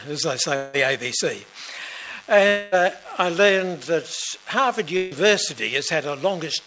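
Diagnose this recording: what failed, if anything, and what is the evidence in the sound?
Long network dropout at 0.56 to 0.76 s and 2.47 to 2.75 s, at the network stage. Each gap is filled by the last sound stretched into a fading buzz or hiss, about 174 ms and 246 ms long, never reaching silence. Audio then resumes with about 180 ms and 240 ms skipped, likely from packets that never arrived.

Burst of packet loss at 4.97 to 5.14 s, also at the network stage, heard through the G.722 call path, whose band stops at 8 kHz. The receiver holds the last sound and fades it for about 144 ms, then picks up 150 ms further on, leaving that stretch missing.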